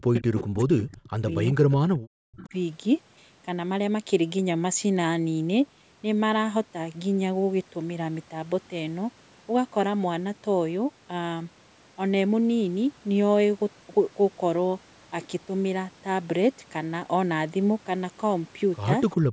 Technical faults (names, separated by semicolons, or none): speech suppressed in double talk; echo leak; background gated by the echo canceller